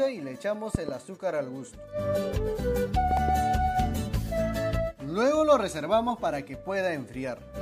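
A voltage step, likely from a plug, switch or static discharge, enters the chain twice, giving a loud pop as a double thump from 0.75 to 0.91 s, about 15 dB above the sound, and again from 3.11 to 3.31 s, about 10 dB above, with the audio continuing underneath.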